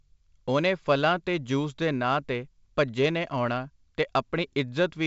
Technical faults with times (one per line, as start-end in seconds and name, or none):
none